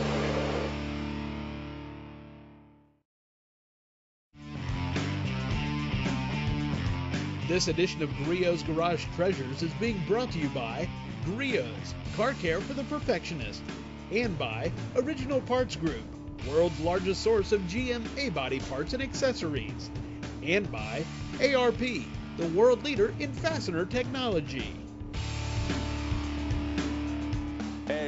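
No technical fault can be heard anywhere in the recording.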